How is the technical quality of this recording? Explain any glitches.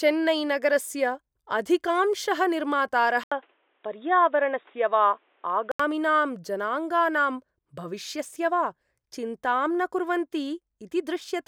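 From 3.24 to 5.80 s the speech turns dull and boxy, with nothing above 3.8 kHz, a faint new background hiss, and an 80 ms gap at the switch, at unchanged loudness. The likely cause is an input switched to a poorer device whose narrower band and own noise replace the original microphone's sound until it returns.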